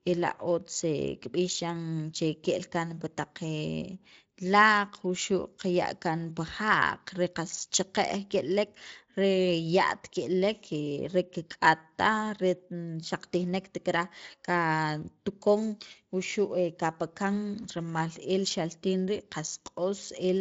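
Nothing goes wrong anywhere in this speech recording, so there's no fault here to describe.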